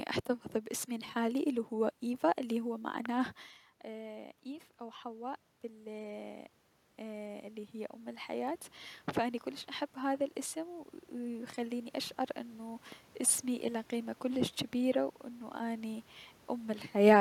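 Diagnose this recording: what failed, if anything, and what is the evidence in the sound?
In the analogue wiring, a loud pop lands at 3.06 s, a single sharp click a little above the speech level, and a double pop follows at 9.11 to 9.19 s, well above the speech. The speech continues underneath both, pointing likely to a switch, connector or static discharge injecting voltage steps.

In call processing, automatic gain rising runs from 3.84 to 8.61 s. Just before, around 3.5 s, the talker moves back and the input drops about 16 dB. The gain control then climbs about 9 dB, and voice and room noise swell together.

Also in call processing, automatic gain falling appears at 16.92 to 17.16 s. The gain control, reacting to input it judged too loud or too noisy, pulls the level down by about 7 dB over roughly a quarter second, so speech and background sink together.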